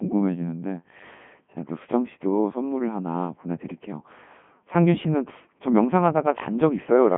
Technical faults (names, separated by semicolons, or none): Codec 2 vocoder